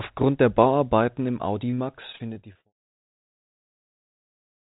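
From 1.7 to 3.61 s the speech breaks up under repeated packet loss, which gives it a robotic sound. Packets go missing or arrive late again and again. There are twelve holes here, the longest about 43 ms. Each hole is patched by stretching the last bit of sound forward. About 16 percent of this stretch is patched material. The result is choppy, with small pieces of speech gone.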